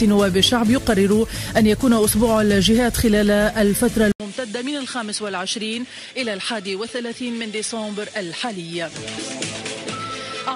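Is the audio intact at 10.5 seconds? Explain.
No. At 10.5 seconds the sound is still in the degraded section that begins at 4.12 s and runs to the end. It matches an input switched to a poorer device: the capture likely moved to a different microphone or a headset call profile. After a gap of about 80 ms, the band stops near 10.5 kHz, the level falls by roughly 10 dB, and a new background noise sits well below the signal, so the sound comes across duller and flatter.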